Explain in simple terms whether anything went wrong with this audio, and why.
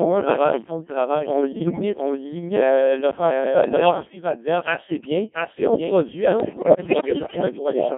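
Quite a bit went wrong here. The whole recording runs through a Codec 2 vocoder, a very low-rate digital radio codec. Instead of sending the actual waveform, it sends a rough recipe of pitch, loudness and tone and rebuilds the voice from that, so the speech sounds robotic, buzzy and narrow like a phone line.

There's also a doubled audio track. A second, somewhat quieter copy of the same speech trails the original by roughly seven-tenths of a second all the way through. It's likely from the audio being picked up twice by a slower path or from two out-of-step copies left in an edit.

On top of that come bit errors on digital voice radio, the kind you get at the edge of coverage. Corrupted bits scramble the vocoder's recipe, so the voice lurches in pitch and level and breaks into warbles and bleeps. It happens at 1.52 to 1.82 s, at 3.64 to 4.15 s (after "euh l'offensive", before "assez bien puis on"), and at 6.40 to 7.42 s, right after "bien puis on produit".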